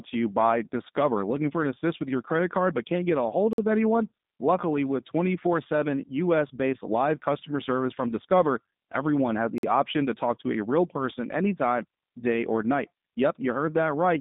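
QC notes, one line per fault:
Throughout: G.729 codec. The speech was coded with the G.729A vocal-tract-filter-and-pulse scheme, consistent with an 8 kbit/s VoIP stream. It was rebuilt from a predictive filter, a pitch predictor and a handful of pulses per frame rather than from the waveform itself, so the coding damage is plainly audible: a rough, synthetic edge on the voice. The line passes only about 150 Hz to 3.7 kHz, and nothing above 3.7 kHz survives, which leaves the speech narrow and muffled.
3.53–3.58 s and 9.58–9.63 s: gap between chunks. The audio was delivered in chunks 6 s apart, and each join left a 50 ms hole of silence. No speech is missing, but it stops briefly at each join. The first falls between "can't get a hold" and "of anyone", the second between "everyone has" and "option to talk to". Because the chunks are a fixed length, the dropouts recur at a steady 6 s spacing.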